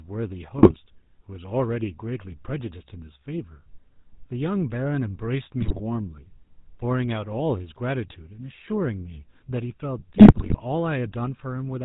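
The whole clip carries GSM full-rate codec damage. The speech is buzzy and gravelly, and nothing reaches above 4 kHz. The codec keeps a vocal-tract model and a sparse pulse excitation. That sound fits the 13 kbps full-rate GSM codec.

GSM bit errors strike at 0.58 to 0.79 s, 5.60 to 5.81 s, and 10.14 to 10.55 s. Corrupted filter, pitch and gain values reach the decoder. The speech squawks, pops and gargles, with level jumps. The last burst lasts twice as long.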